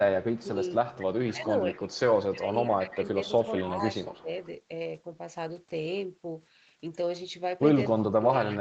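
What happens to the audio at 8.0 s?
From 7.88 s to the end of the clip at 8.61 s, the speech is pulled down by as much as about 30 dB, most likely speech suppressed in double talk: an echo canceller mistook the talker for loudspeaker echo while both sides spoke. The voice dips.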